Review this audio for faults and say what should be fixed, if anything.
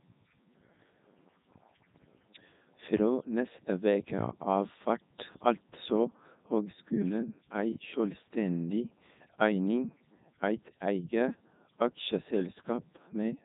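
Throughout, the speech was carried by the Codec 2 vocoder and resynthesised from pitch and envelope as sine waves. It sounds heavily robotic and buzzy, with nothing above 3.8 kHz, which fits the 3.2 kbit/s mode. To prevent this, send the speech over a waveform codec such as Opus instead of a parametric vocoder.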